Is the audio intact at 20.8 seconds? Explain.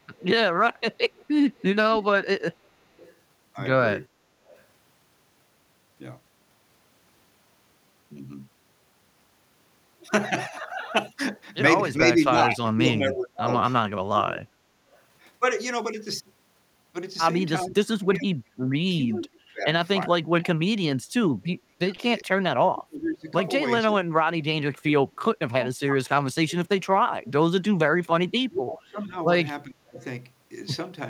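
No. At 20.8 s two faults overlap. From 17.64 to 30.03 s, with both sides talking, the echo canceller likely could not tell this talker from the loudspeaker echo and turned everything down. That is speech suppressed in double talk: the voice dips by up to about 30 dB and drops out in pieces, about five seconds in all. Between 19.24 and 22.24 s there is also an echo leak, likely from a far-end loudspeaker whose echo canceller let some pickup through. A faint copy of the speech returns about 0.4 s later, roughly 25 dB below it.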